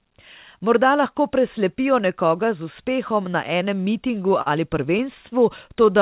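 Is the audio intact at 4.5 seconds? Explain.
No, not quite. Just before 4.5 s, from 4.42 to 4.49 s, there is a short stall from a late packet. The packet arrived late, the jitter buffer ran dry, and the receiver stretched the last sound for about 44 ms before resuming from the same point. The result is a slightly held sound with a slight buzz or dip. Unlike a lost packet, nothing is skipped, so no sound is missing. Everything after 4.49 s simply plays about 44 ms later.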